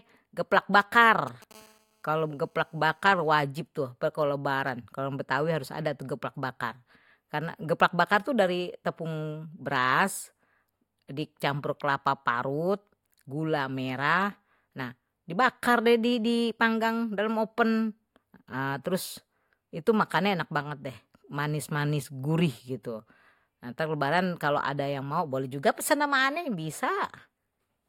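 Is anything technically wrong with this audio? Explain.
Yes. From 0.80 to 1.53 s there are GSM signalling bursts. A nearby 2G handset sends short groups of radio bursts while it registers or negotiates, and the audio circuitry rectifies that RF into the signal path. The result is a galloping dit-dit-dit of brief buzzes at 217 Hz, the handset's burst repetition rate. It sits roughly 20 dB under the speech.

From 1.54 to 3.38 s, ending just before "tuh kalo lebaran", the pattern changes to a continuous GSM phone buzz. The handset has moved into a call and now transmits a burst 217 times a second without pause. Rectification turns those pulses into a hard, raspy 217 Hz tone rich in harmonics. It is steady, unrelated to the speech, and about 34 dB below it.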